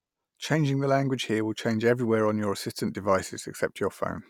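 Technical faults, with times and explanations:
No technical faults can be heard in this speech clip. Nothing in it calls for a time or an explanation.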